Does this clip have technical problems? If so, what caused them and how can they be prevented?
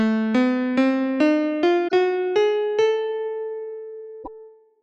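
Yes. Damaged data in a compressed stream occurs at 1.84 to 1.93 s and again at 4.19 to 4.28 s. Corrupted bytes make the decoder misread those frames and lose sync until it finds the next frame header, producing brief disruptions. Checksummed transfers and error-resilient streaming prevent it.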